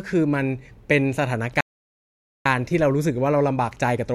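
A playback stall silences this speech clip from 1.61 to 2.46 s, about 0.85 s, likely because the player ran short of data or its thread blocked.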